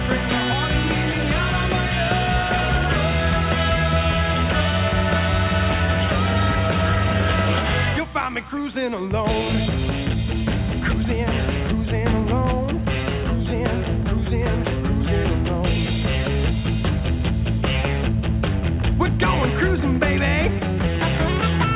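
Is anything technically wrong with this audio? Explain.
No, nothing in this audio is technically wrong. It has the sound of a call line working as it should: nothing comes through above 4 kHz, and that band limit points to a narrowband telephone codec such as 64 kbps G.711 A-law.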